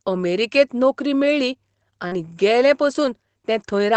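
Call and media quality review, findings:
Short concealed packet loss, 2.07–2.13 s: brief smear where about 40 ms never arrived; the decoder extended the last sound, then blended back. Jitter buffer/PLC side.

Lost packet rebuilt from error correction, 2.11–2.13 s: one 20 ms frame played from Opus in-band FEC copy, so rougher and noisier, but no gap.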